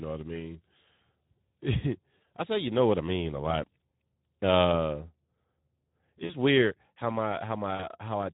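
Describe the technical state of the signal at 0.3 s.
At 0.3 s the speech already carries Speex codec damage, and it runs through the whole clip rather than starting here. Speex models speech with a predictive filter driven by a coded excitation. At this rate the excitation gets too few bits, so much of the fine detail is lost. The result is plainly audible: a noisy, hoarse, rough texture on the speech. That level of coarseness fits a bitrate around 11 kbps.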